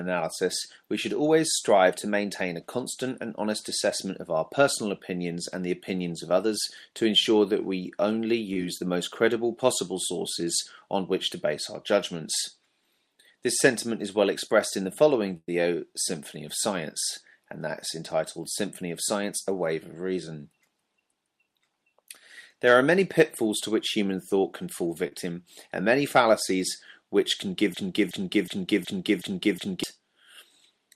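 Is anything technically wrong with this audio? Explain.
Yes. The audio has three kinds of fault.

Short concealed packet loss occurs twice: from 8.53 to 8.56 s, and from 25.08 to 25.12 s. In each case a small stretch of audio never reached the decoder in time. About 20 ms is missing at the first point and about 30 ms at the second. The receiver covered each gap by extending the sound that came just before. It then faded back into the real signal. Each one is heard as a brief smear or wobble.

A burst of packet loss runs from 15.37 to 15.49 s. Here about 110 ms of audio was lost in a row. The receiver carried the last sound forward and lowered it as the gap went on. The end of the gap, about 30 ms, is silent. The sound then resumes further along, and the section in between is gone. It comes across as a short held tone or hiss that fades, then a jump.

A broken-record loop runs from 27.74 to 29.84 s. 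A fragment 0.37 s long plays six times back to back, each repeat identical. The most likely cause is a stalled player, encoder or stream that kept sending the last piece it held. Whatever should have played during those two seconds is lost. It sounds like a stuck, stuttering repetition.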